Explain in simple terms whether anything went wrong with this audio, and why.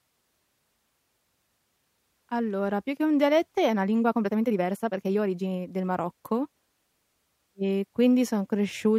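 From 3.68 to 5.72 s the speech suddenly rushes, about 1.47 times faster, yet keeps its pitch: likely a time-stretched section squeezed by software.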